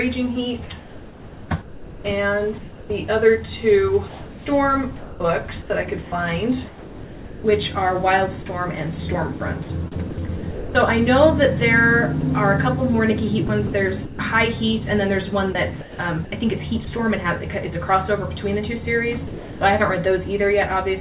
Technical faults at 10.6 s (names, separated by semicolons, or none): sound chopped by the voice detector